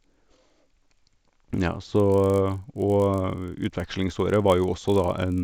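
Throughout, the resampler restarted on every 20 ms block. The mismatched edges buzz at 50 Hz while speech sounds, showing as evenly spaced vertical spectrogram lines.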